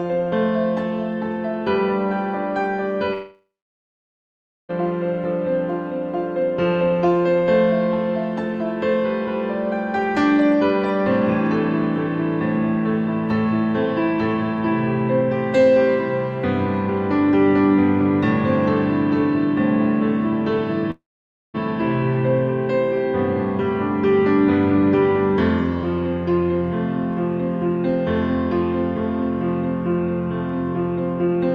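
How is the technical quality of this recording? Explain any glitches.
The recording has two breaks where sound stops. At 3.13 to 4.71 s and at 20.91 to 21.56 s, the last sound smears into a fading buzz, then about 1.2 s and 0.5 s of silence follow. This is likely a long network dropout: the receiver stretched the final audio, gave up, and resumed later, skipping the lost 1.6 s and 0.64 s. Unlike brief packet-loss clicks, the audio stays absent long enough to go silent.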